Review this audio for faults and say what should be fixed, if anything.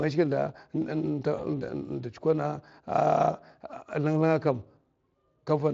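VoIP packet loss concealed by the speech codec, 1.37 to 1.41 s: a lost packet, fitting one 20 ms frame, made the Speex decoder extrapolate, smearing the speech into a brief fading buzzy tone or coloured noise. Forward error correction or redundant packets on the network link would prevent this.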